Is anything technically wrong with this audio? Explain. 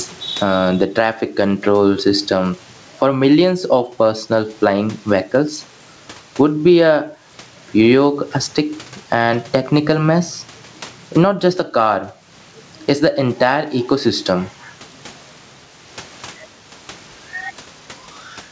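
Yes. Gain pumping runs throughout. The gain swings roughly 15 dB. The likely cause is excess gain clamped by a fast limiter.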